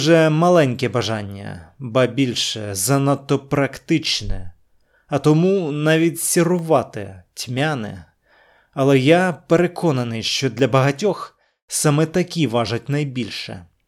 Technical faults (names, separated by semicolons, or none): periodic USB or driver dropouts